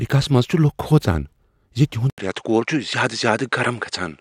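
At 2.10 s the speech drops out for 80 ms, then returns duller and about 5 dB quieter, with nothing above 9.8 kHz and faint new noise some 50 dB down. This is likely an input switched to a poorer device. A spectrogram shows a gap then a flat ceiling, and the waveform narrows.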